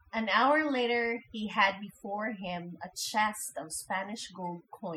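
A speech recording with overdone noise removal throughout: the noise reduction was set far too aggressively, muting individual frequency bands that fall near its noise estimate. Quiet voice detail disappears with them, leaving near-silent gaps sprinkled with twinkling specks.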